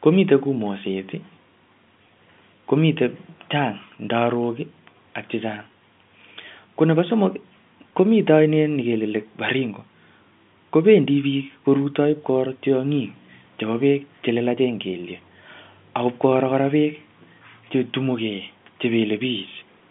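No technical faults can be heard; the speech carries the narrow band of a G.711 A-law telephone line, running from about 150 Hz to 3.5 kHz, which is what that coding normally produces.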